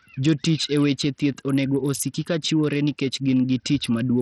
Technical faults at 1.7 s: Bluetooth SBC compression

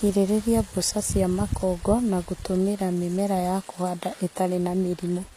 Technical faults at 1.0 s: HE-AAC compression

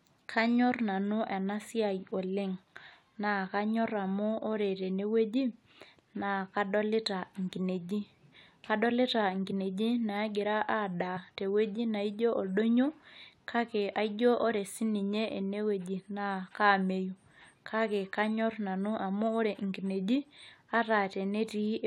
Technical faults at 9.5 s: compressed frames skipped

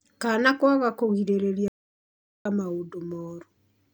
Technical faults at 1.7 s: playback stall

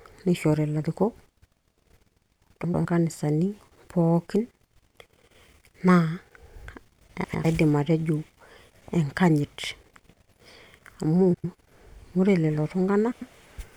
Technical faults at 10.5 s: none

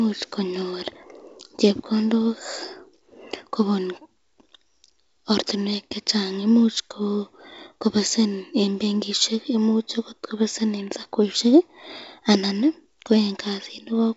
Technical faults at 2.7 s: none

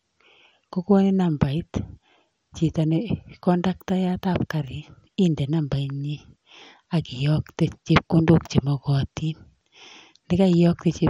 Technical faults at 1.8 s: MP2 compression

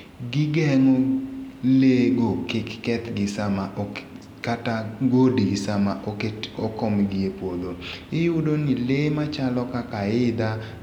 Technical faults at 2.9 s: none

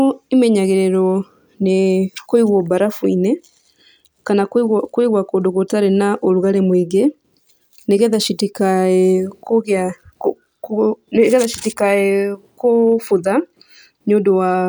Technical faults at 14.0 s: none

